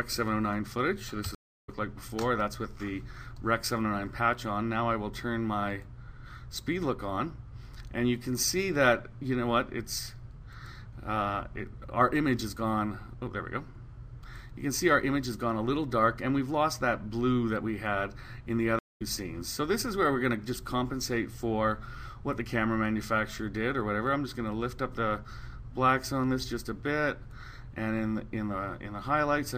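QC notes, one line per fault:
1.35–1.70 s: stream reconnect. The connection drops into about 0.33 s of silence, then a fresh decoder resumes the sound roughly 0.3 s further on.
18.79–19.02 s: stream reconnect. The link breaks again, leaving about 0.21 s of silence; playback restarts mid-stream roughly 0.2 s later, so material is skipped.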